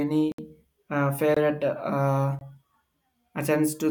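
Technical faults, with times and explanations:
0.32–0.38 s, 1.34–1.37 s and 2.39–2.41 s: block of digital silence. The speech drops abruptly to silence, for 64 ms and then twice for about 21 ms. No fade occurs. The short gaps fit a missed 1024-sample buffer.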